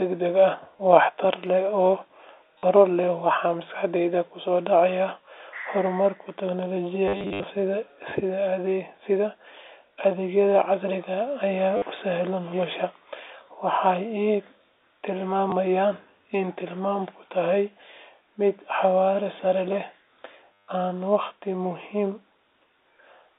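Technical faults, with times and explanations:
0.77 s: packet loss with last packet repeated. About 20 ms is filled by replaying the previous packet, so a quick stutter is heard.
2.59 to 2.63 s: the same packet loss with last packet repeated, 50 ms long. The repeats buzz at 100 Hz, which fits 10 ms packets.
7.08 to 7.44 s: packet loss with last packet repeated, scattered. About 220 ms is lost over 360 ms, with the longest run 70 ms. This gives a robotic, choppy stutter.
11.77 to 11.82 s: packet loss with last packet repeated, 50 ms. A short 100 Hz buzz is heard.
15.5 s: packet loss with last packet repeated, 20 ms. A single brief stutter is heard.
20.68 s: packet loss with last packet repeated, about 150 ms. This is a longer robotic buzz at the 10 ms packet rate.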